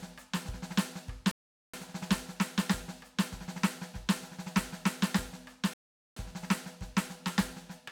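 The music drops to silence at 1.31 s and again at 5.74 s, each gap lasting about 0.42 to 0.43 s, then picks up exactly where it left off. These are rebuffering stalls: the player ran out of downloaded audio and waited for more, adding time without losing any.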